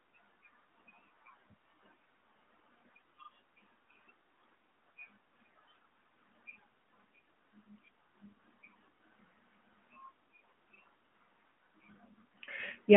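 No technical faults are audible in this speech.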